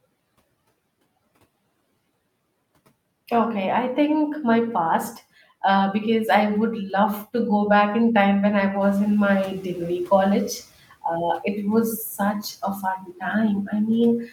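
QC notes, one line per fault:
8.80–10.59 s, noise suppressor catching up: just after "in time when I", the room noise jumps by about 11 dB around 9 s and comes through louder at first. Over about 1.8 s it sinks by about 11 dB as the suppressor's noise estimate adapts, leaving it about 24 dB below the speech. A gradual settling after a noise rise points to an adaptation lag, unlike pumping, which rises and falls with each burst of speech.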